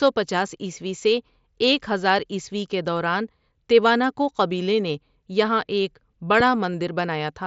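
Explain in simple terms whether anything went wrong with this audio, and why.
A sharp pop cuts in at about 6.40 to 6.43 seconds, right after "قبیلے نے یہاں ایک", standing out well above the speech, which carries on underneath. This loud pop is likely a sudden electrical jolt, such as a switch, plug, static or driver hiccup, added to the signal.

A moment later, at 6.74 seconds, there is a tiny, almost hidden blip. This is concealed Bluetooth headset packet loss: a few milliseconds of sound between headset and phone went missing, and the receiver filled the gap by repeating a similar stretch of recent audio, so the break is barely noticeable through the headset's wideband mSBC link.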